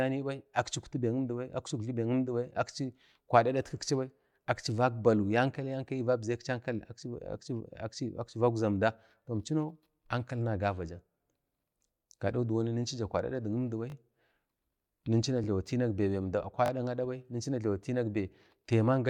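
The device was starved of new audio three times and replayed its last buffer, which fits a 20 ms buffer. The repeats fell at 13.9–13.94 s (twice), 15.44–15.46 s (once) and 16.66–16.7 s (twice). Each repeated buffer is a brief hard-edged stutter or buzz, with no speech apparently skipped.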